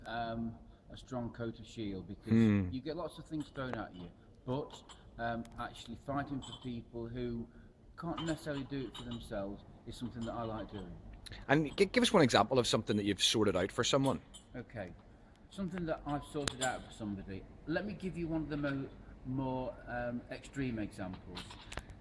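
At 16.48 s, a WAV file header has been played as audio: where two pieces of the recording were joined or streamed together, the header of the incoming piece was never stripped, so its few dozen bytes of metadata were read out as sample values. Those bytes bear no relation to the surrounding waveform, and they produce a single sharp, loud click that cuts across the sound regardless of what the signal is doing at that moment.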